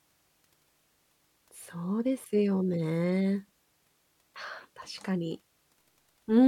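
No technical faults are audible.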